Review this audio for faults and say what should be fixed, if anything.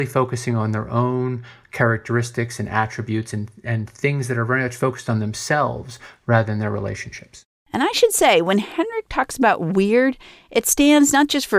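From 5.36 to 6.86 s there's crude rate conversion: a gritty, inharmonic fizz tracking the speech, roughly 35 dB down. It fits a 32 kHz to 48 kHz step done by linear interpolation without filtering. Use a proper band-limited resampler for that section.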